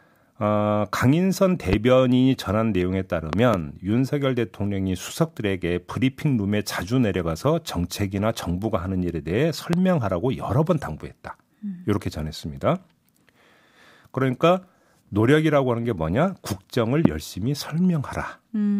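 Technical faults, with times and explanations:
1.73–1.75 s, 3.33–3.56 s, 9.73–9.76 s and 17.05–17.08 s: loud pops. Sharp thumps jump out above the speech, about 15 dB louder, and about 20 dB for the last. The one at 3.33 s is a double pop. A voltage spike, likely from a switch, plug or static, was added to the signal. The speech continues underneath.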